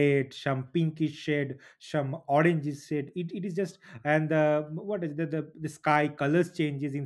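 At 3.09 s there's a single sharp click in the speech, the kind you'd get from dropped samples. A tiny fraction of a millisecond has likely gone missing from the stream, so the waveform jumps straight from one value to a later one instead of moving smoothly between them. That step is far too short to take out any of the speech, but the sudden discontinuity comes through as a quick tick and would show as a thin vertical line on a spectrogram.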